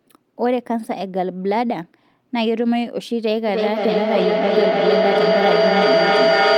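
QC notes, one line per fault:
3.48 to 6.57 s, feedback echo between two devices. From 3.48 s the speech returns about every third of a second, thinner and more ringing each pass. The repeats build rather than fade, peaking about 5 dB above the speech. A second device on the call replays this microphone's audio, which is picked up again. The local echo canceller cannot remove sound another device plays.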